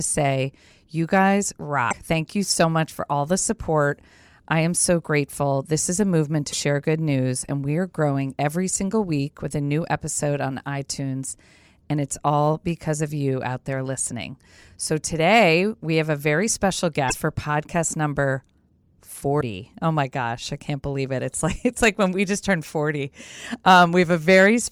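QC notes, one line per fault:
1.9 to 1.94 s: damaged data in a compressed stream. Right after "say you guys" a short glitch lasting about 40 ms cuts in; the decoder hit corrupted bytes, could not parse the frame, and resynced at the next valid header.
6.49 to 6.54 s: damaged data in a compressed stream. Between "is a movement" and "good news and we" a similar blip of about 45 ms.
17.07 to 17.12 s: damaged data in a compressed stream. Between "have a very special" and "for podcast number" the same brief glitch.
19.37 to 19.41 s: damaged data in a compressed stream. One more glitch of about 40 ms, same mechanism.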